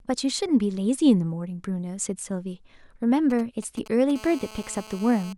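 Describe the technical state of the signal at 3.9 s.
At 3.9 s you're in the middle of GSM signalling bursts, running from about 3.30 to 4.12 s. A nearby 2G phone's short radio bursts get rectified by the audio circuit, giving a galloping dit-dit-dit of short 217 Hz buzzes sitting roughly 20 dB under the speech.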